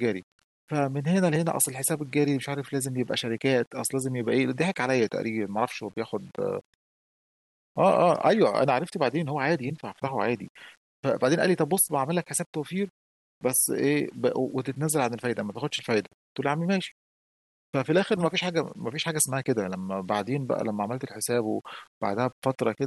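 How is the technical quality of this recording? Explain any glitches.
The speech carries low bit depth without dither for the whole clip. The grit rides on the speech itself, about 35 dB below it, and quiet tails sputter or drop to silence, which fits rounding to 9 bits. The likely cause is requantising with no dither, so the error tracks the signal, unlike steady hiss that stays present during pauses.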